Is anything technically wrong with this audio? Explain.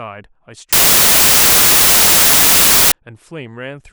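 Yes. From 0.73 to 2.92 s the speech turns into loud, harsh broadband noise from samples built from the wrong bytes: misassembled bytes push the rapidly changing low bits into the top of each value.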